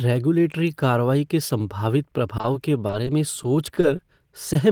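A speech clip with repeated packet loss (robotic sound) from 2.37 to 4.01 s: ten short gaps, each 20 ms or less, are patched by extending prior audio, giving choppy, robotic speech. A short concealed packet loss at 4.53 to 4.57 s follows, where about 20 ms of continued sound briefly smears the signal.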